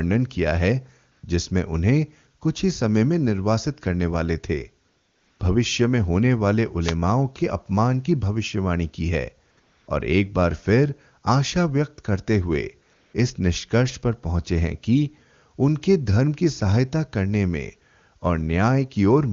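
AMR comfort noise first appears from 1.11 to 1.23 s, a 120 ms gap where the sending phone judged the speech silent and stopped transmitting speech frames. The receiver fills the hole with synthetic noise built from a rough level-and-spectrum sketch, so the real background drops out and a smooth, even hiss takes its place, switching in and out at the edges. It happens again from 4.89 to 5.39 s, the longest stretch at 500 ms.

A wireless microphone noise hit follows from 6.81 to 6.95 s. For about 140 ms the FM radio link fades as reflected paths cancel the wanted signal, letting the receiver's own noise climb. The result is a brief swish of static before the signal recovers.

The comfort noise returns in two close spells, 9.51 to 9.57 s (60 ms) and 9.59 to 9.87 s (280 ms), with only a sliver of real audio between them. The background flickers from real to synthetic and back. A final 200 ms patch runs from 12.93 to 13.13 s. 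The wideband coding of the speech itself carries little audible damage, which points to one of the higher AMR-WB rates, around 23.85 kbit/s.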